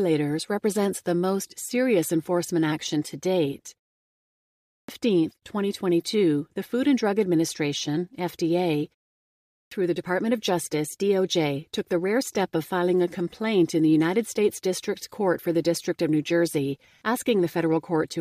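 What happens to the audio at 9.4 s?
A clipped start after a pause runs from 9.21 to 9.71 s. After a 0.35 s silence, the output device had dropped into a low-power state and needed about 0.50 s to wake, so the speech resumes abruptly, its opening sounds missing.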